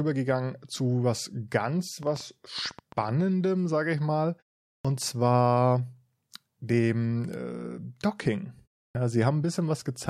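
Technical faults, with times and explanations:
2.03–3.10 s, train of clicks: Right after "zu was ganz" and running up to "sage ich mal", a burst of around fifteen similar clicks sits on top of the speech at about 11.3 per second. The spacing is irregular, so it reads as uneven ticking, not a steady buzz. The peaks reach roughly the level of the speech. The likely source is impulsive interference from nearby equipment or a faulty connection or power supply, which would inject a short pulse into the signal each time.
4.79–4.85 s and 8.89–8.95 s, clipped start after a pause: Both times, speech resumes abruptly, with its opening missing. The first case follows a 0.45 s pause after "sage ich mal" and loses about 56 ms. The second follows a 0.3 s pause and loses about 59 ms. The output device drops into a low-power state during the silence and needs those tens of milliseconds to wake and relock, so the initial sounds never reach the output and the next utterance seems to start mid-onset.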